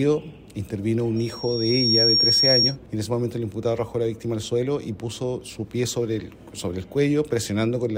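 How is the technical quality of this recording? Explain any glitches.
The recording has one clear glitch, a loudspeaker feedback squeal from 1.16 to 2.76 s. A microphone was picking up the loudspeaker it was feeding, and around 5.6 kHz the loop gain crept past one, so that frequency kept feeding itself. You hear a single high, piercing tone swell up over roughly three-quarters of a second and settle a few dB above the rest of the sound before it drops away at 2.76 s.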